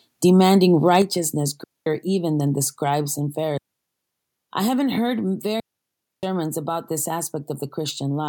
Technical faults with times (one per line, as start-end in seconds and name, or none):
0.88-0.97 microphone overload
1.02 microphone volume stepped down
1.64-1.86 digital wireless dropout
3.06 microphone volume stepped down
3.58-4.48 digital wireless dropout
5.60-6.23 digital wireless dropout